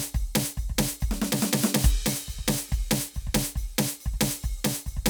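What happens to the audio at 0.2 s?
At 0.2 s the music plays through cleanly, with no dropout, click, distortion or other fault at that point.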